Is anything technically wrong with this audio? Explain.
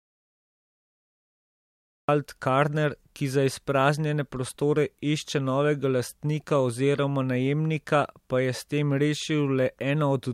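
Yes. From the very start to 2.09 s the clip is dead silent, with no room tone at all, before the speech comes in mid-flow. This is an audio dropout to silence, likely a lost input or mute while the recorder kept writing zeros.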